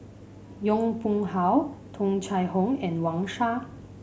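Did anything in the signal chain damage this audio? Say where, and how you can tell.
No, I can hear no damage anywhere in this chain.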